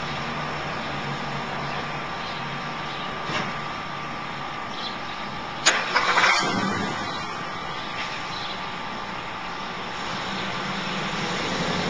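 At 3.12 s and again at 10.29 s there is a very brief disturbance, a chirp, squawk, click or short hole. Both come from damaged data in a compressed stream: corrupted bytes left the decoder misreading frames and losing sync until it found the next frame header.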